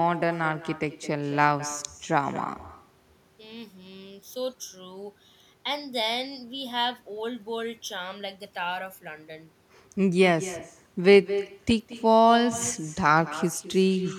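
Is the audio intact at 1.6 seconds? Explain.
No. Echo with no canceller affects the speech at 1.6 seconds, as it does across the whole clip. The far end is apparently playing the call through a loudspeaker, and its microphone picks that playback up and sends it back with nothing removing it. Each phrase is therefore shadowed about a fifth of a second later by a copy roughly 16 dB quieter, which sounds thinner than the direct voice.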